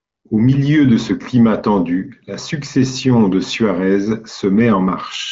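No technical faults are audible in this speech.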